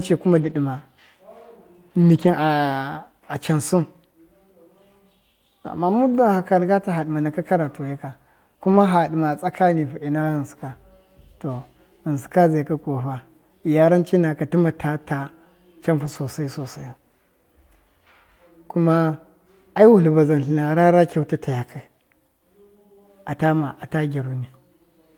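Speech with lost packets rebuilt from error correction at 0.37–0.51, 2.01–2.27, 3.51–3.53, 8.63–8.77, 10.21–10.23, 16.05–16.15 and 21.13–21.15 s. Low-bitrate backup copies fill each loss, so the sound stays continuous but turns rougher and noisier. A spectrogram shows no gap, only grainier, smeared patches.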